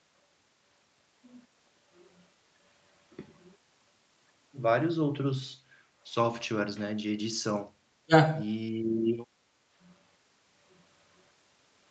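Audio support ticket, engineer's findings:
Echo canceller over-suppressing mic during far-end playback: background gated by the echo canceller, 5.74–5.95 s. Room tone drops by about 6 dB for roughly 0.2 s, then recovers once the canceller releases. A short hole in the ambience, not a full mute. The band above 8 kHz is already empty throughout, consistent with the call path's Opus coding at about 32 kbps.

Likely double-talk misjudgement in the echo canceller: speech suppressed in double talk, 8.06–8.12 s. With both ends active, the canceller apparently treated near-end speech as echo and attenuated it, roughly 30 dB down. Near-end speech briefly cuts out for around 70 ms, heard as a clipped gap.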